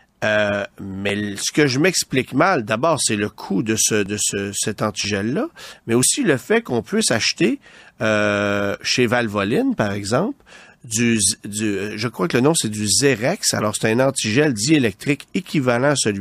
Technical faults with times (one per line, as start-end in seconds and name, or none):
4.06 overlap between stream segments
6.03 overlap between stream segments